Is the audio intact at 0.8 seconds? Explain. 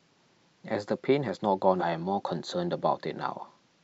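Yes, at 0.8 seconds the speech plays through with no audible fault.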